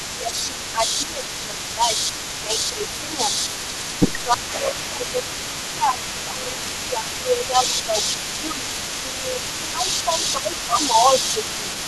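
From the very start to the end of the clip there is an echo leak. A second copy of the speech trails the original by about 320 ms and sits only a few decibels below it, so it is nearly as loud as the direct sound. The likely cause is a far-end loudspeaker whose echo canceller failed to remove what its microphone picked up, sending that sound back. Unlike room reverberation, which smears into a decaying tail, this is a distinct, repeated copy arriving at a fixed delay.

Speech suppressed in double talk shows up in five spans: 0.12 to 1.93 s, 2.43 to 3.3 s, 4.24 to 7.96 s, 8.38 to 8.65 s and 9.63 to 11.14 s. The talker's level dips in pieces, by roughly 10 dB in the first three spans and about 5 dB in the last two. In all but the fourth span the dips add up to well under the full length, ranging from a fraction of a second to about two seconds in the longest. The likely cause is an echo canceller that, faced with both sides talking at once, could not tell the local talker from the loudspeaker echo and turned both down. 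The dips are partial and line up with the overlapping talk, whereas a network dropout cuts to silence at moments unrelated to who is speaking.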